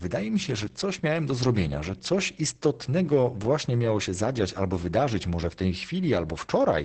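Speech throughout, damaged by heavy Opus voice compression: content stops near 8.5 kHz, and the voice sounds muffled, hoarse and slightly robotic. This fits the SILK linear-prediction coder in wideband mode at around 10 kbps, coding the excitation coarsely.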